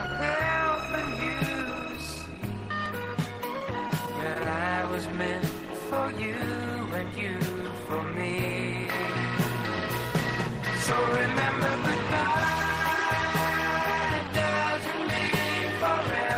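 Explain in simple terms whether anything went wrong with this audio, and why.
Tiny skips at 2.86, 8.85, 11.84 and 14.83 s point to audio missing between chunks: likely the recorder drops a few milliseconds each time it switches its 3-second pieces. Between 3.59 and 4.45 s there are scattered short gaps, about five brief holes patched by stretching the sound just before each, giving little ticks or smears.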